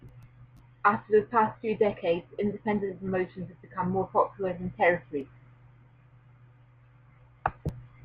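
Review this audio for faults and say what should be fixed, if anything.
Nothing needs fixing here; I listened closely and didn't hear any technical faults in this speech recording.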